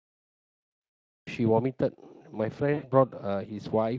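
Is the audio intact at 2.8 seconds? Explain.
No. From 2.73 to 2.91 s there is VoIP packet loss concealed by the speech codec: roughly 100 ms of packets went missing, and the decoder extrapolated the last pitch and filter with falling gain. Unlike a clean silent dropout, the gap becomes a fading buzzy or noisy smear that stays weak for a while after packets return.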